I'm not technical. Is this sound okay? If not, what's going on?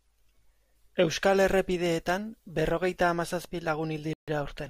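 No. A Bluetooth stall at 4.13 to 4.28 s drops the speech to silence for about 0.14 s, likely because wireless interference delayed the audio reaching the headphones.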